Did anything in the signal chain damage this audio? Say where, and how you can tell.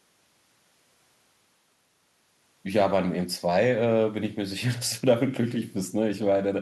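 No, nothing in the signal chain damaged this speech.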